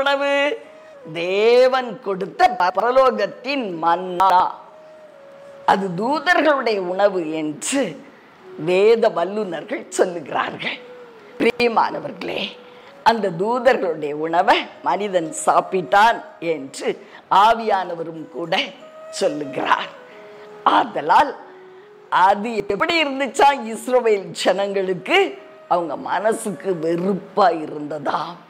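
Four times, a 100 ms chunk of audio arrived one slot late and played after the chunk meant to follow it: at 2.6–2.8 s, 4.2–4.4 s, 11.4–11.6 s and 22.6–22.8 s. These chunks out of order lose nothing, but each swap sounds like a brief jumbled stutter at the hard joins.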